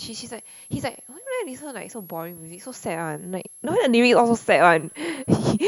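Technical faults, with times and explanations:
Throughout, switching supply whistle: a thin high whistle sits under the speech, wandering between about 10.7 and 11.4 kHz, roughly 25 dB below the voice. A switching power supply is running in an audible burst mode or beating with another one, its pitch shifting as load changes.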